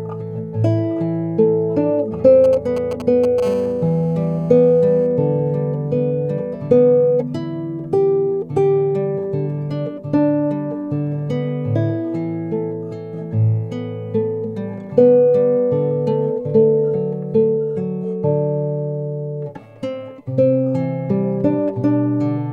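From 2.44 s to 3.40 s, GSM signalling bursts break into the audio: a galloping dit-dit-dit of ticks and brief buzzes, sitting roughly 10 dB below the signal. A nearby 2G handset is exchanging short control transmissions with its network. The audio circuitry rectifies each radio burst, so the pulsed carrier envelope turns into audible clicks and short stretches of 217 Hz buzz, grouped in the irregular rhythm of the signalling.

Immediately afterwards, from 3.43 s to 5.07 s, the pattern settles into a continuous GSM phone buzz at about 23 dB below the signal. This is the handset in an active call, transmitting a burst every frame at a 217 Hz repetition rate. Rectification of those regular pulses produces a hard, raspy tone at 217 Hz with a dense stack of harmonics. It runs steadily across this span and has no relation to the wanted audio.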